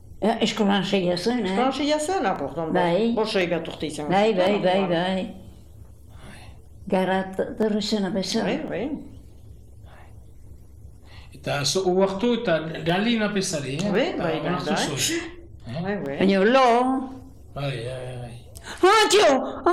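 From 0.25 to 19.22 s a click recurs every 1.05 s, likely clock drift buffer slips. Unlike random dropouts, the spacing is strictly regular.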